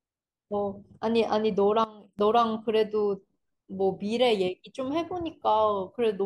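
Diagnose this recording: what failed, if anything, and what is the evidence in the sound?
A sudden gain jump at 1.84 s drops the speech and its background noise together by about 16 dB, and both return at 2.19 s. The likely cause is a digital gain setting in the driver or processing stage applied instantly, with no ramp between samples.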